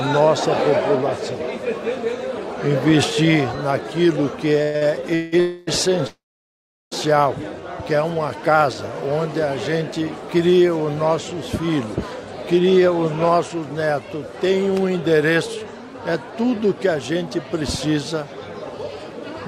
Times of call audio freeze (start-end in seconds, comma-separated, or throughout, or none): 5.40-5.69, 6.07-6.93